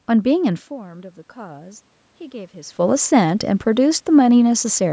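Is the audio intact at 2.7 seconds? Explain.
No. At 2.7 s the clip is inside an automatic gain rising span, from 0.69 to 2.82 s. After the level fell by about 17 dB, the gain control slowly added about 4 dB, so voice and room noise swell together. The waveform envelope and the spectrogram's noise floor brighten gradually across the span.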